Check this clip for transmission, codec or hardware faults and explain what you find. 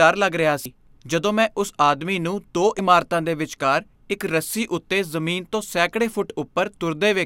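Two brief faults from damaged data in a compressed stream: 0.63 to 0.66 s, after "ਲੱਗ ਰਿਹਾ" and before "ਜਦੋਂ ਮੈਂ ਉਸ ਆਦਮੀ", and 2.76 to 2.79 s, after "ਉਸ ਆਦਮੀ ਨੂੰ ਦੋ" and before "ਇਮਾਰਤਾਂ ਦੇ ਵਿਚਕਾਰ ਇੱਕ". Corrupted bytes made the decoder misread frames and resync, so each 30 ms spot is a brief glitch, unlike packet loss, which leaves a muted or smeared gap.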